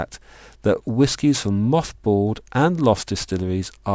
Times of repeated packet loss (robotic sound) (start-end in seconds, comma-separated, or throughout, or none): none